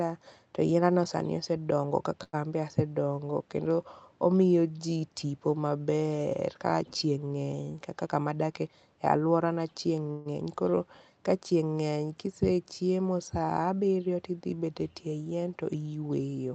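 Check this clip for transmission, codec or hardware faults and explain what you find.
Four transmission faults stand out in this speech, all typical of a call carried over a jitter buffer. The audio is limited to about 8 kHz, which fits an Opus call link at a modest bitrate.

Short stall from a late packet, 2.23 to 2.35 s, just before "anbe asedongo": a packet arrived late and the jitter buffer ran dry. The receiver stretched the last sound for about 97 ms and then resumed exactly where it left off, so nothing is lost. The result is a held, slightly buzzy sound.

Jitter buffer speed-up, 8.06 to 8.68 s, ending just before "e aluora": the buffer had built up more delay than it aims for. To shed about a tenth of a second, the receiver cut out pitch-period-sized slices again and again. The speech runs at about 114% speed with its pitch unchanged and sounds rushed.

Call audio freeze, 10.11 to 10.27 s: the sound hangs for about 142 ms as a continuation of the last sound that fades but never drops to silence. 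The likely cause is packets held up in transit, which emptied the buffer. Playback then picks up again with nothing skipped.

Short concealed packet loss, 10.37 to 10.40 s: about 40 ms of audio never reached the decoder, and only about 8 ms was filled by extending the preceding sound before blending back. The result is a brief smear or wobble, and part of the audio there is simply gone.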